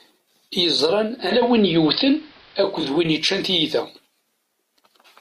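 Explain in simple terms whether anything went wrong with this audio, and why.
Two things went wrong. From about 0.97 to 3.03 s there's digital radio blending to analogue: the set lost its digital signal and eased over to the AM broadcast for a couple of seconds. The treble drops off, with faint hiss. At 3.44 s, a bit error spike: one corrupted sample gives a single sharp tick.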